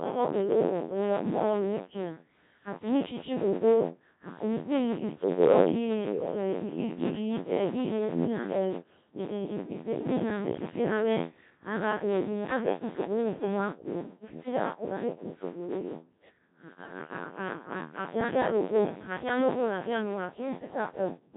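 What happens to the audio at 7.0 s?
Buffer tearing runs through 7.0 s, as it does across the whole clip: writer and reader cross inside each buffer, so roughly a seventh of every block replays audio about 50 ms old, giving a rattling 86.1 Hz buzz that fits a 512-sample buffer. Codec 2 vocoder damage is also present at 7.0 s and throughout. The speech is rebuilt from pitch, voicing and a spectral envelope rather than the waveform, leaving it heavily robotic and smeared, consistent with the 1.3 kbit/s mode.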